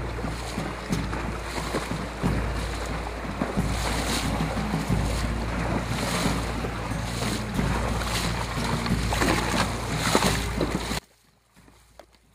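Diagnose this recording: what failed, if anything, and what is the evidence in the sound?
From 10.99 to 12.35 s the sound falls about 30 dB, likely one channel inverted in analogue wiring, cancelling shared content when summed to mono.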